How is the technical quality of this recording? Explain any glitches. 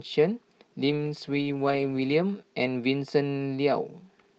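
The recording has one glitch, a call bitrate drop, heard against the call path's normal 8 kHz audio bandwidth.

Call bitrate drop, 0.86 to 2.47 s: the bandwidth estimate fell, starving the Opus encoder of bits, consistent with roughly 40 dropping to 11 kbps. The speech turns rough and muffled for 1.3 s.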